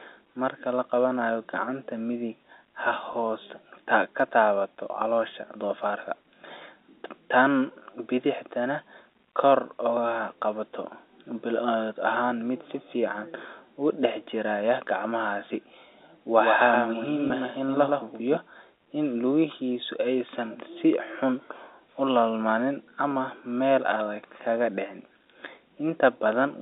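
Packet loss with pitch repetition at 3.13 s and from 17.28 to 17.30 s briefly holds the speech on a buzzy repeated pitch period, bridging gaps of 10 ms and 20 ms that fit one and two lost packets. A doubled audio track runs from 16.37 to 18.37 s, with a second copy about 5 dB quieter trailing by roughly a tenth of a second, likely from a slower capture path. It starts and stops abruptly, across a G.711 telephone line band of 300 Hz to 3.7 kHz.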